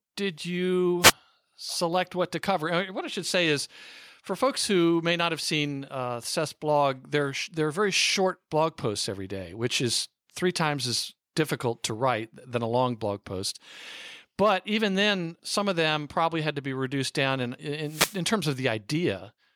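A speech clip with two wireless microphone noise hits. Static swishes in at 1.01 to 1.13 s, before "select what to cover", and at 17.83 to 18.22 s, after "be reduced down in". The FM radio link fades as reflections cancel, so receiver noise surges briefly.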